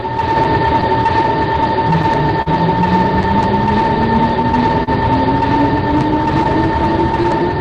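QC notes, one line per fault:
throughout: clock drift between sender and receiver. The sending clock runs roughly 3% slow, so the jitter buffer keeps draining and the receiver repeats short pieces to keep up. Unlike isolated losses, these small hiccups recur across the whole clip at uneven intervals.
0.01–2.48 s: scattered short gaps. About seven lost or late packets are patched by continuing the preceding sound, roughly 100 ms filled in all and the longest near 40 ms. They are brief ticks and smears confined to this opening stretch, not spread throughout.
4.83–4.89 s: short stall from a late packet. The buffer ran empty, so the receiver stretched the last sound for 37 ms until the packet arrived, then resumed in place with nothing lost. It is one held sound with a slight buzz or dip, not a cluster of hiccups.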